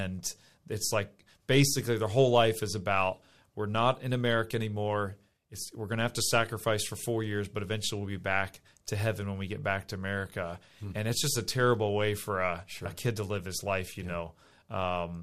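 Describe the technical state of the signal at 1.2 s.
At 1.2 s the speech signal is intact, with no audible fault at that point.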